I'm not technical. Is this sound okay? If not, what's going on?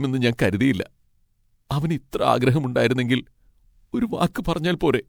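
No, the speech sounds swirly, smeared and hollow throughout. That's generation loss, likely from saving it as MP3 about five times over.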